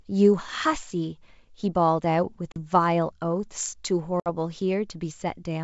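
Packet loss on an ADPCM call cuts the speech at 2.52–2.58 s and 4.20–4.29 s. The gaps of about 40 ms and 60 ms fit roughly two and three lost packets. Each shows as a hard-edged blank column in the spectrogram and a flat waveform. The decoder's predictor and step size drift, so sound resumes slightly distorted before settling.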